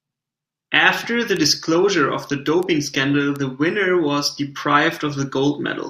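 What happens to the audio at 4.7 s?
Nothing goes wrong at 4.7 s: the speech carries straight through that moment with no dropout, click, distortion or other fault.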